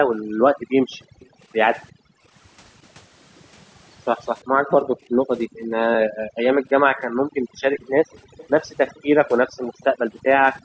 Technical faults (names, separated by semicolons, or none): overdone noise removal; background gated by the echo canceller; echo leak